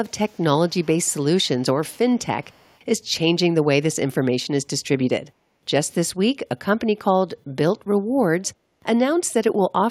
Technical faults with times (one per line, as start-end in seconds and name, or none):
0.27-2.79 echo leak